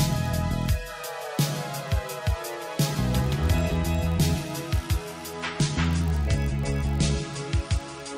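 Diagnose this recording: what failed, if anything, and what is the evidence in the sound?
Driver or buffer stage: a block size mismatch (padded) produces a steady buzz at 46.9 Hz throughout, which fits a 1024-sample read block with zero-filled tails. Playback runs only marginally slow.

Network stage: from 5.33 s to the end, an adaptive stream at a lower bitrate raises codec artefacts with no gap, consistent with dropping to roughly 40 kbit/s MP3.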